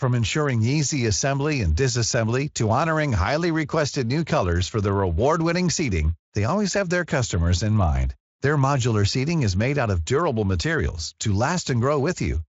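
No faults are audible anywhere in this speech clip.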